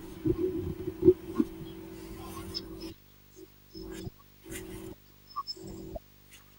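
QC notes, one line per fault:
Throughout: video or display buzz. A steady 50 Hz buzz at the picture's field rate, with a gritty hash riding above it, sits well under the speech, roughly 25 dB down, as a screen or video cable leaks its scanning signal into the audio path. A very high whine at 15.6 kHz comes from the line rate. On a spectrogram it shows as a dense comb of horizontal lines spaced every 50 Hz, plus a thin steady line near 15.6 kHz.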